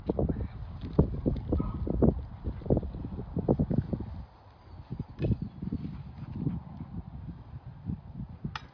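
There are no technical faults to describe at any point in this audio.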